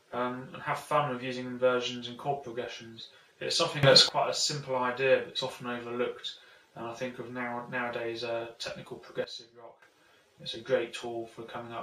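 At 3.83 s the level jumps up by about 15 dB with no ramp, and the background noise rises with the sound, holding until 4.09 s before dropping back. A second sudden gain jump at 9.24 s cuts the level by about 14 dB, again taking the noise floor down with it, and recovers at 9.82 s. Both steps are likely a digital gain change applied from one sample to the next.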